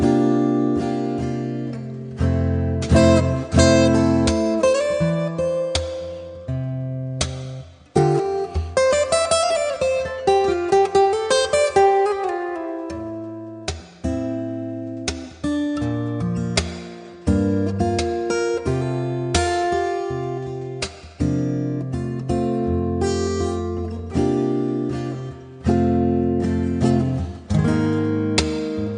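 No technical faults can be heard anywhere in this audio. Nothing in it calls for a time mark or a repair.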